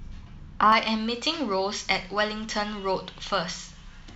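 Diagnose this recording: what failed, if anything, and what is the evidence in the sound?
Pre-emphasis left on: the transmission chain's de-emphasis stage was skipped from 0.72 s, leaving speech thin, bright and sibilant, about 11 dB hot at 10 kHz.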